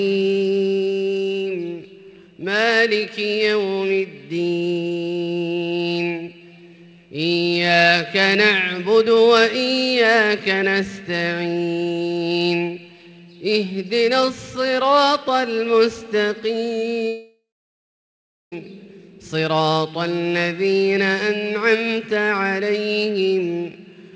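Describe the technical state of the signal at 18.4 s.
At 18.4 s the audio is inside a long network dropout, likely the cause, running from 17.08 to 18.55 s. About 1.4 s of sound never arrives. A brief fading buzz fills the start of the gap, then roughly 1.1 s of silence holds until the audio resumes.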